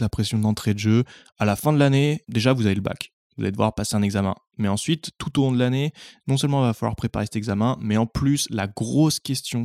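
No faults detected in this speech recording; the background dropping to silence between phrases is normal behaviour, and the signal returns in time for each onset.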